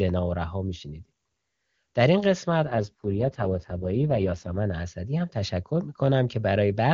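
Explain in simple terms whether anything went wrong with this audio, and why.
Yes, something goes wrong for about two seconds. From 2.65 to 4.57 s the speech turns rough, buzzy and a bit robotic, then clears up again. There's no gap and it doesn't get muffled. This is an AMR rate drop. The phone network told the HD Voice codec to switch to its lowest setting, most likely because of a weak radio signal. With far less detail to work with, the codec rebuilds the voice more crudely until the normal setting returns.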